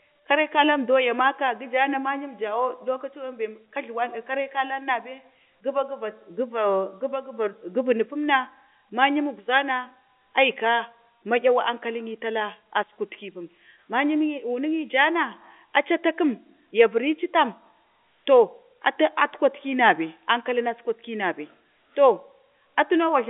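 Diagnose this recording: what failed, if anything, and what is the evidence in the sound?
Nothing failed; the telephone coding works as expected.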